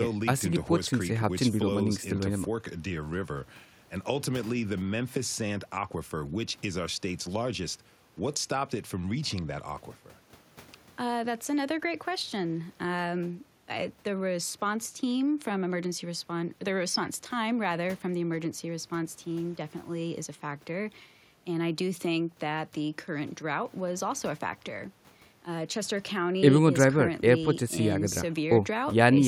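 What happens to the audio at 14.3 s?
Nothing goes wrong at 14.3 s; the speech runs through that moment intact, with no dropout, click or distortion.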